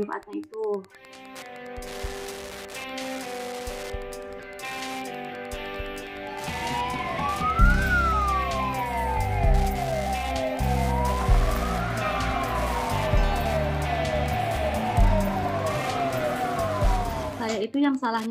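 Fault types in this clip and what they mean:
Wi-Fi interference: the audio circuit rectifies a nearby Wi-Fi radio's beacon. It ticks every 102.4 ms throughout, roughly 20 dB below the sound.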